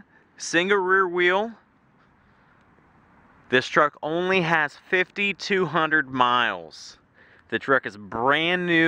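Nothing in the audio stands out as a technical problem; it's a fault-free listen all the way through.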